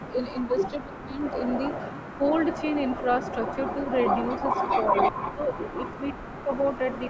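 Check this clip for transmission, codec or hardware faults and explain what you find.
Two call-path faults run through this speech. Echo leak, across the whole clip: a copy of the talker returns about 393 ms late at roughly 5 dB below the speech, likely from a loudspeaker echo canceller that left residue. Speech suppressed in double talk, at 0.0–0.54, 0.86–1.19, 5.11–5.72 and 6.14–6.49 s: the voice dips by about 10 dB, and by about 20 dB in the last stretch, likely because the canceller mistook overlapping talk for echo.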